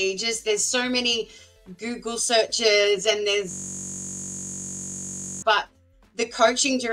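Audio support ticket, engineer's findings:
System hang loop, 3.51 to 5.42 s. A 21.33 ms slice of audio repeats exactly, about 90 passes, giving a steady 46.9 Hz buzz. Host or driver stalled while the output device kept replaying its ring buffer, which fits a 1024-sample buffer.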